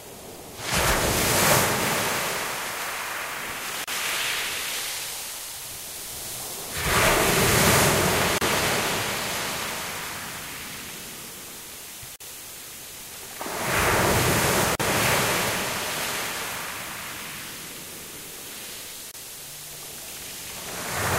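A recording of sounds, broken by a gap at a join of encoded pieces at 3.84, 8.38, 12.16, 14.75 and 19.11 s, each a silence of 27 to 45 ms with smeared edges. Unlike a dropout, nothing is lost: the sound resumes exactly where it stopped, because encoder delay and final-frame padding were left in at each join.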